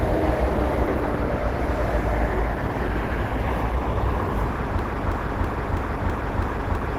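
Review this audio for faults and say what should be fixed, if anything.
Throughout the clip the sound is muffled, hoarse and grainy, with clearly audible codec damage even though content still reaches about 20.2 kHz. This is likely Opus compression in its hybrid speech-oriented mode, consistent with a low bitrate around 16 kbps. Encode at a higher Opus bitrate so the encoder stays in its music mode.

From 4.79 s to the end, a 0.33 s fragment repeats back to back seven times, a broken-record loop that replaces whatever should have played there. A player, encoder or stream likely stalled and kept resending its last buffer. Add stall detection so playback drops to silence or resyncs instead of replaying the last fragment.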